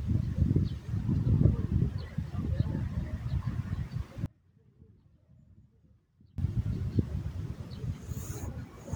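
An audio dropout to a faint residue runs from 4.26 to 6.38 s. The sound cuts abruptly for about 2.1 s, leaving only a faint trace far below its normal level, likely a break in the signal path while the downstream chain stayed live, before returning just as suddenly.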